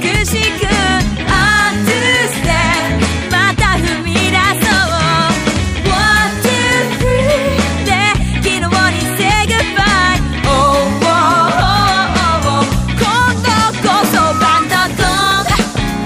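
A single tone near 1.3 kHz swells over about a third of a second into a loudspeaker feedback squeal, roughly 5 dB above the surrounding audio, from 14.17 to 14.68 s. A microphone was picking up its own loudspeaker, and the loop gain at that frequency exceeded one.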